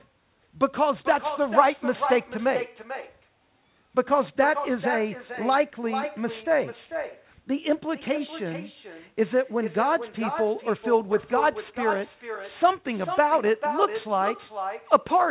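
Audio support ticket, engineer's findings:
Echo with no canceller, throughout. Each phrase is shadowed by a quieter, thinner copy, about 8 dB down and roughly 0.4 s late. The far end plays call audio on a loudspeaker, its mic picks it up again, and no AEC stage removes it. Call audio is band-limited, with nothing above 4 kHz, consistent with a G.711 path.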